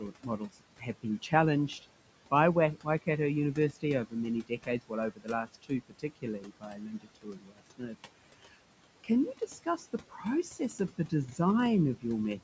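Speech recorded through call microphone processing, with nothing above 8 kHz and room noise sitting about 17 dB below the voice. Noise suppressor artifacts run through the whole clip: the suppressor pulls the room noise down by about 18 dB in each band it judges to be steady noise, frame by frame. The background therefore sinks in the gaps between words and comes back up underneath them. This gating that follows the speech is what tells it apart from the room noise itself, which stays steady and is part of the recording. The same processing also causes speech cut by the noise suppressor. Here the suppressor mistakes parts of the voice for noise and turns them down along with the background, by about 17 to 18 dB at the deepest. This happens between 0.0 and 1.32 s (around a third of a second in total), between 2.75 and 3.08 s (roughly a tenth of a second), between 3.73 and 7.96 s (about one and a half seconds in all, the longest stretch) and between 9.04 and 11.39 s (around half a second). 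In these stretches soft consonants, word endings or quiet phrases sound swallowed. Unlike a dropout or a codec gap, the cuts land only on the weakest speech and leave no clicks or silent holes.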